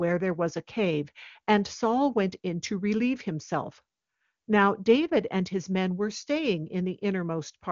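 Listening through this speech recording, nothing stood out as a technical problem.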